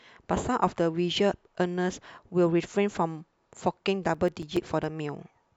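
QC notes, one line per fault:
4.01–4.84 s, CD scratch ticks: seven short clicks, the longest around 5 ms, one per disc turn where damaged data gets patched over or muted.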